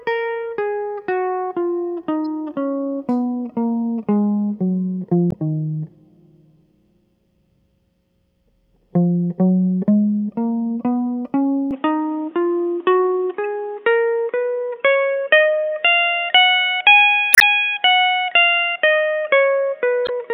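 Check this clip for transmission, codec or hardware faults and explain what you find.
Two kinds of fault are present in this music clip: short bursts of corruption in the compressed data, and a drop in quality partway through that points to a change of input device.

Damaged data in a compressed stream appears at 2.24–2.26 s, 5.29–5.34 s, 13.44 s, 17.31–17.42 s and 20.05–20.10 s. Where bytes in the encoded stream are wrong, the decoder misreads those frames, loses its place and hunts for the next valid frame header. Each event is heard as a brief chirp, squawk, click or short hole. The longest is at 17.31 s, at a little over a tenth of a second.

Input switched to a poorer device from 11.71 s to the end. The music abruptly turns dull and boxy, with nothing above 3.8 kHz, a level shift of roughly 5 dB, and a new background noise floor sitting roughly 45 dB below the music. There is no gap at the changeover. 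This is most likely the recording moving to a narrower-band microphone or a headset's call profile, which has its own tone and noise.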